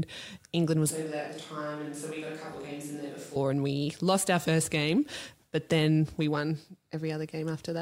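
From 0.91 to 3.36 s, the voice turns suddenly roomy, hollow and thin, about 10 dB quieter, with more background noise. This is likely a switch to a distant microphone.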